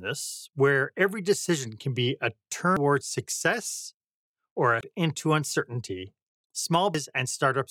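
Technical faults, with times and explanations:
2.77 s (between "decision can be a" and "success or a"), 4.81 s (after "success or a") and 6.95 s: damaged data in a compressed stream. Corrupt frames knock the decoder out of sync while it searches for the next frame header.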